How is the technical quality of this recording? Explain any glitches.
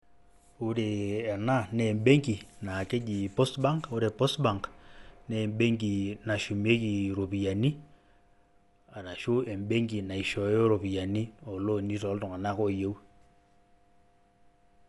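The quality is poor, with plainly audible codec damage throughout the speech. The likely cause is Dolby Digital compression at a starved bitrate, around 64 kbps. The encoder has cut everything above 11.5 kHz and left many frequency lines to decoder-filled noise, so the speech sounds dull, with a rough, fluttering grain around tonal parts.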